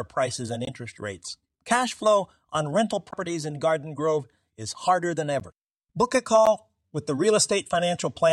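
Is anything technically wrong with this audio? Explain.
Yes. There are two kinds of dropout in this speech clip.

From 0.65 to 0.69 s and from 3.11 to 3.14 s there is what sounds like a Bluetooth stall, likely caused by radio interference delaying packets until the receiver's buffer emptied. Playback halts for about 20 ms and then 13 ms of silence before the speech resumes.

At 5.40 s and again at 6.46 s, a block of digital silence appears. Each time, the output buffer probably wasn't filled in time and about 11.6 ms of zeros went out, which fits a 512-sample buffer. The gap is short enough to be heard as a tick or dip rather than as silence.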